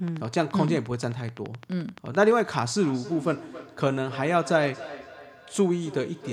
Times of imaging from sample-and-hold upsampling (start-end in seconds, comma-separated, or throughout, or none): none